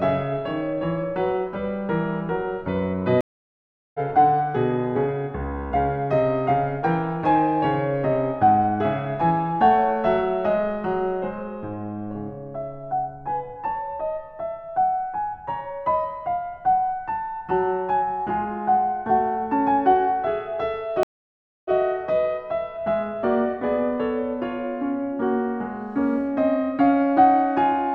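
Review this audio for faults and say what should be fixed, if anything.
Two stream reconnects interrupt the music. At 3.21 to 4.00 s the sound drops out for 735 ms and resumes roughly 0.4 s further on. At 21.03 to 21.74 s a 619 ms silence ends with the music restarting 93 ms earlier, so a sliver repeats. Unlike a plain dropout, where the timeline carries on through the gap, each break comes back at a displaced point, because the player reconnected and began decoding afresh mid-stream. To prevent it, enlarge the client's buffer and resume from the exact byte or segment offset after reconnecting.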